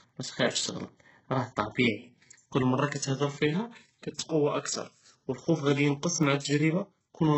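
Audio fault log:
throughout: HE-AAC compression, likely. Treble is rebuilt from lower bands, nothing above 8 kHz, heavy damage. Sibilants sound gritty and metallic, which fits a bitrate near 8 kbps.
0.09–7.25 s: periodic USB or driver dropouts. Brief silent gaps of about half a millisecond, repeating every 1.02 s. Heard as regular ticks, about seven.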